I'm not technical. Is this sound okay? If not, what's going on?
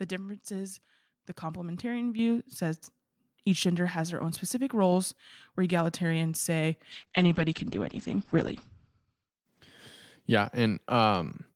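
No. At 2.19 s, right after "difference is the complementarian", the voice and room suddenly get louder together: a microphone volume step-up, where the call software turned the mic up all at once.

From 6.93 s to about 10.95 s, after "where egalitarians say", the voice turns rough and muffled. This is a call bitrate drop: the connection weakened, so the audio was sent with much less detail.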